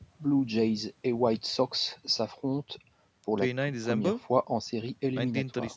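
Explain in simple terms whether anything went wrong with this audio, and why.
Nothing went wrong: the speech has passed through normal call microphone processing, which trims the deepest bass and leaves nothing above 8 kHz, and that is expected behaviour, not a fault.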